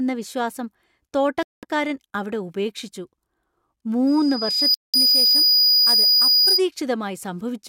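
At 1.43 s the speech cuts to about 200 ms of silence, then resumes at "അവിടെ ഉപേക്ഷിച്ചു", to 1.65 s. The likely cause is a Bluetooth stall: delayed packets let the headphone buffer run dry. Unlike a codec dropout or a clipped edit, nothing is smeared. It is a clean hole followed by a continuation.

From 4.07 s to 6.62 s a loudspeaker feedback squeal appears. A single tone near 4.9 kHz swells over roughly 0.7 s to about 10 dB above the speech. The microphone is hearing its own loudspeaker, and at that frequency the loop gain exceeds one. This self-growth separates it from a steady whine or an interference tone, which would start at full level.

A second stall, likely another Bluetooth stall, about 195 ms of silence, interrupts playback from 4.74 s to 4.96 s, silencing the squeal with everything else.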